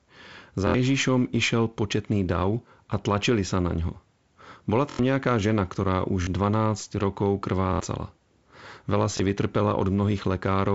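Speech with repeated buffer faults at 0.67–0.74, 4.90–4.99, 6.22–6.27, 7.73–7.80 and 9.17–9.20 s. Each time, new audio arrived late, so one 23 ms slice replayed one to four extra times, which fits a 1024-sample buffer. The result is a short, hard-edged stutter, and roughly 20 to 100 ms of sound is lost. The G.722 wideband coding is audible as a top end stopping near 7.7 kHz.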